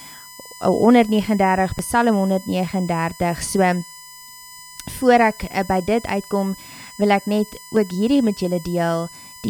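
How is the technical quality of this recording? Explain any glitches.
The recording has two technical faults: a steady electrical whine throughout and three brief skips.

A USB whine runs the whole clip, pitched at 1 kHz with its strongest harmonic at 5 kHz, about 20 dB below the speech. Current drawn in 1 ms bus frames leaks into the audio path. On a spectrogram it shows as flat horizontal lines at 1 kHz multiples.

There are short jumps at 1.79, 4.78 and 7.76 s, each losing around 15 ms, likely audio missing between chunks as a recorder switches 3-second blocks. Each is heard as a tiny skip, and in the waveform it appears as an abrupt splice.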